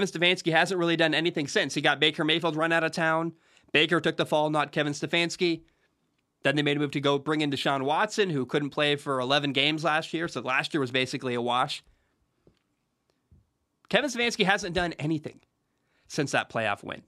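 No technical faults can be heard anywhere in the recording.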